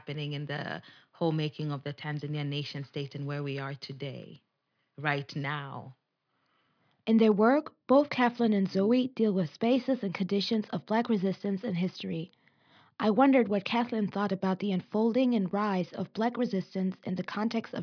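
No technical faults can be heard anywhere in the recording; the signal stays continuous and stable throughout.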